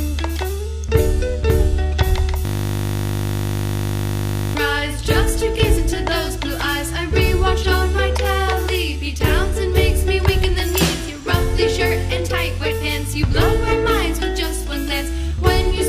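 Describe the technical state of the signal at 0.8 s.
At 0.84 s there's an electrical switching spike, a single sharp snap lasting about a millisecond and riding on top of the sound rather than replacing it. It's the kind of click you get when a nearby switch, motor or static discharge arcs for an instant and the audio line picks up that burst as a voltage jump. The likely culprit is a brief arc like that, coupled in electrically rather than through the air.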